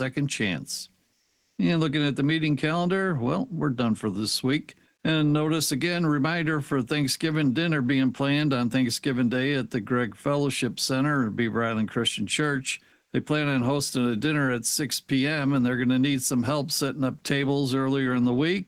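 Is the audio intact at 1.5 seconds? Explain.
No. From 1.21 to 1.57 s the real background gives way to steady, featureless comfort noise at the same level, likely from discontinuous transmission filling a pause with synthetic noise.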